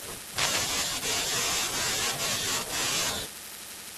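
A speech recording with cable scratch noise from 0.38 to 0.64 s: a dense, uneven rustle about as loud as the speech, likely from a worn connector being moved, unlike the isolated sharp ticks of clicks.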